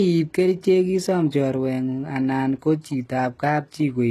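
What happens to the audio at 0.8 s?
Likely HE-AAC compression at a low bitrate, around 16 kbps, runs through the whole clip, including 0.8 s. Its band-replicated treble, which stops at a 12.3 kHz ceiling, makes the s sounds plainly gritty and metallic.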